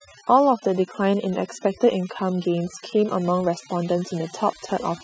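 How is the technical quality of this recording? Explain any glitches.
The recording has one problem. Throughout, overdone noise removal suppresses bands near the noise estimate, dropping the background and leaving twinkling specks in near-silent gaps, unlike a gate's whole-signal cutoffs.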